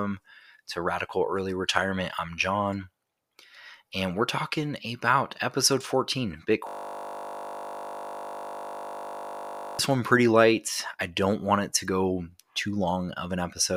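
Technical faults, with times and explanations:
6.67–9.79 s, system hang loop: the speech suddenly locks into a steady 50 Hz buzz for about three seconds. The machine or its audio driver froze, but the sound hardware kept replaying the same 20 ms chunk from its ring buffer, well over a hundred times. Because the loop is so short, the repeats blur into a pitched drone at the loop rate rather than a stutter, which points to a buffer of about 20 ms.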